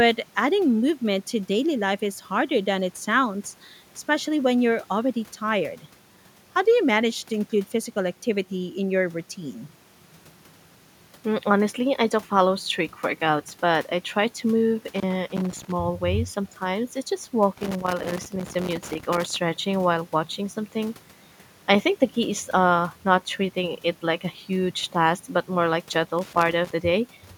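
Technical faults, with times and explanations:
14.9–15.8 s, 17.6–19.4 s and 26.2–26.7 s, loose connector crackle: a worn contact intermittently breaks the line, chopping the speech into irregular bursts of scratchy crackle.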